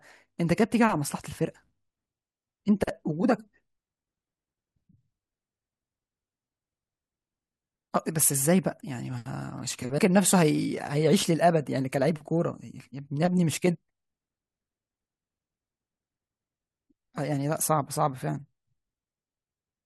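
At 9.97 s the speech jumps abruptly forward with a brief blip, as if a stretch of the programme has gone missing. This is likely a stream segment skipped: one segment failed to load, and playback carried on from the following one.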